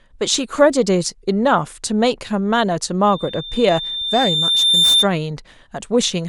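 From 3.06 s to 5.08 s a loudspeaker feedback squeal rises over the speech: a single tone at 3.6 kHz that swells steadily for around two seconds until it sits roughly 5 dB above the voice. A microphone was picking up the loudspeaker it fed, and at that one frequency the loop gain passed unity, so the tone fed itself. Unlike a steady whistle or interference tone, it starts faint and grows while holding one fixed pitch.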